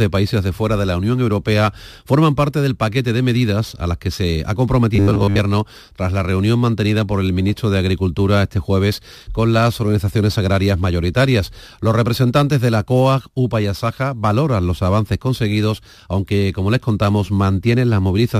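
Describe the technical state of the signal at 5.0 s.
At 5.0 s you're right inside a stretch of robotic sound from repeated short buffers, running from 4.96 to 5.39 s. The speech turns into a rigid metallic buzz at 100 Hz. That likely comes from the same 10 ms chunk being replayed over and over, covering most of the audio in that span.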